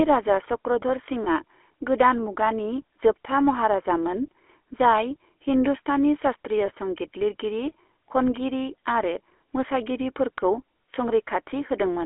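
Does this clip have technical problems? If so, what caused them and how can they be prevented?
Yes. The speech carries GSM full-rate codec damage throughout. It sounds buzzy and gravelly, and it is plainly audible. The band is limited to about 300 Hz to 3.4 kHz. The codec models the vocal tract and drives it with a sparse, regular pulse train. The roughness fits 13 kbps GSM full rate. To prevent it, use a wideband codec such as AMR-WB or Opus instead of GSM full rate.

Lost GSM frames also occur, at 1.24 to 1.29 s and 6.66 to 6.71 s. Each gap fits a single lost 20 ms frame. The decoder repeats the last good frame's settings. This briefly holds the sound as a rough, metallic ring. To prevent it, improve the radio link or add error protection, so fewer frames arrive corrupted.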